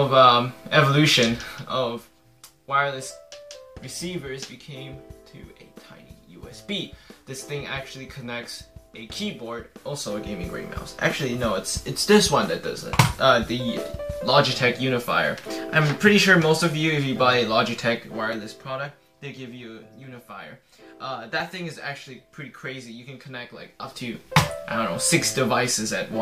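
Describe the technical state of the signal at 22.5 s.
At 22.5 s the signal is intact, with no dropout, distortion or other fault audible at that point.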